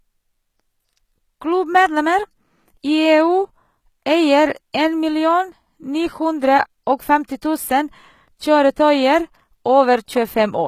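From start to finish the speech carries plainly audible HE-AAC compression damage. The treble is not real. It has been rebuilt by copying lower bands upward and shaping them with a rough envelope. The copied harmonics do not line up with the true ones. So s sounds come out gritty and metallic. Nothing survives above about 14.9 kHz. The synthetic top fits a low bitrate near 20 kbps, which is the likely cause.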